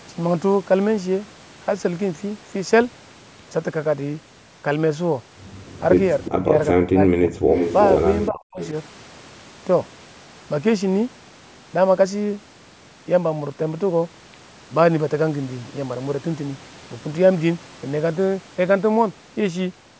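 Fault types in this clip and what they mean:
Echo leak: A faint, delayed copy of the speech, trailing by about 363 ms, shows up briefly around 6.23 s and 8.62 s and more strongly from 7.5 to 7.89 s. It's likely a far-end loudspeaker whose echo canceller let some pickup slip back.
Speech suppressed in double talk: The speech drops out hard, by roughly 40 dB at worst, from 6.29 to 6.55 s, 6.73 to 7.34 s and 8.29 to 8.6 s. Likely the canceller couldn't separate talker from echo during overlap and turned everything down.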